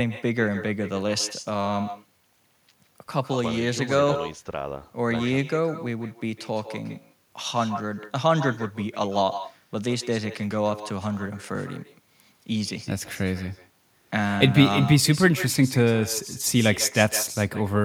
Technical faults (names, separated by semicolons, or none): echo with no canceller